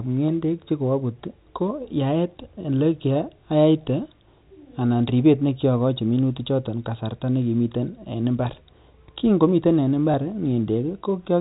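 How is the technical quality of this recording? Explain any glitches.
There is one glitch, near the end of the speech. It lasts 20 ms, which fits a single lost 20 ms packet.

From 10.12 to 10.14 s there is packet loss with the last packet repeated. A packet of audio went missing in transit. The receiver filled the gap by playing the previous packet a second time. It sounds like a small blip.

The telephone band from the G.711 A-law coding can also be heard, with nothing above 4 kHz.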